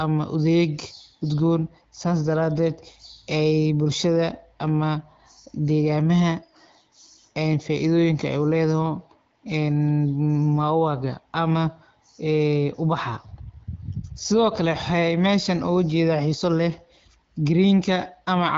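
No technical faults are audible anywhere in this speech.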